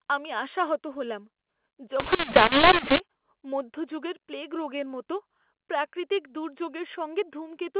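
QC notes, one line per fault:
2.00–3.00 s, mu-law and A-law mixed up: for one second speech turns harsh and gritty, loudness jumps unevenly and pauses fill with hiss. The mu-law bytes are decoded as A-law, mapping each to the wrong amplitude and lifting near-silent samples well above zero.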